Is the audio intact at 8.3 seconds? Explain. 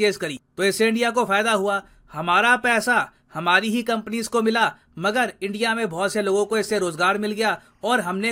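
No. Timecode bleed runs from 6.04 s to 8.32 s: faint 24-frame code leaking in chirps near 1 and 2 kHz, drawing steady spectrogram lines there.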